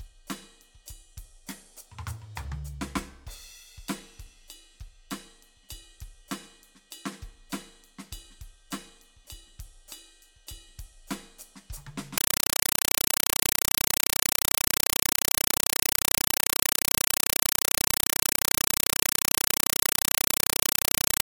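Compressed stream played as audio from 12.18 s to the end at 21.26 s: the music gives way to very loud, chattering static. A Dolby Digital (AC-3) stream is being treated as ordinary samples, so each 5.33 ms noise burst, repeating 31.25 times a second, plays raw, consistent with a 256 kbps stream.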